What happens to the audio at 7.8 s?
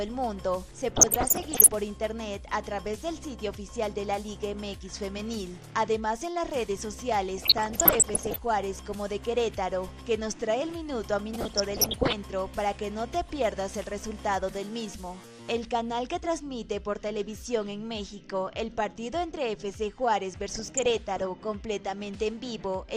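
At 7.8 s the sound is in a burst of DAB burbling lasting from 7.38 to 8.38 s. Bit errors, at a rate of around one percent, slip past error correction and corrupt sample values and scale factors, so single sub-bands get blips of noise or leap in level for up to a frame. The result is bubbling, squelchy chirps. On a spectrogram these appear as flickering rectangular blocks confined to single sub-bands.

Beneath this, MP2 compression dulls the whole sound with a gurgling graininess. This is likely from too few bits per sub-band, consistent with roughly 80 kbps, which switches upper bands off and quantises the rest coarsely. A spectrogram would show a hard high-frequency ceiling with patchy, flickering bands below it.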